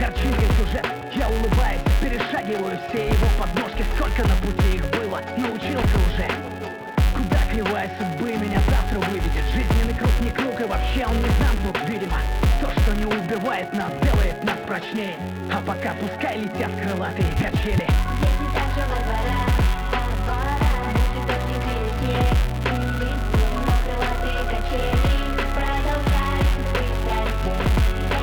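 A filter restarted on every block runs throughout the audio. The filter discards its state at each block boundary and starts again from silence, leaving a small transient at every block start. These repeat 200 times per second, heard as a steady buzz that rises and falls with the sound's level.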